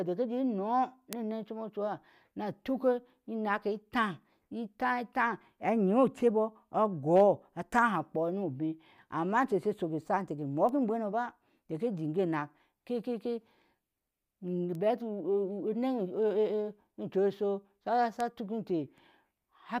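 A bit error spike flips a single bit of the stored speech value, throwing it by a power of two before it snaps back. Sharp broadband ticks result at 1.13 s (about -8 dBFS), 10.69 and 14.75 s (about -26 dBFS), and 18.20 s, three samples long (about -20 dBFS).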